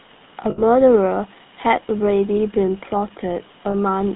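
The whole clip carries GSM full-rate codec damage, plainly audible. Nothing above 4 kHz survives, and the sparse pulse excitation gives the speech a buzzy, gravelly roughness. That points to roughly 13 kbps coding.

At 0.50 s and 3.70 s there are lost GSM frames. The last good frame was repeated. Each gap rings metallically, for about 0.12 s and then about 0.05 s.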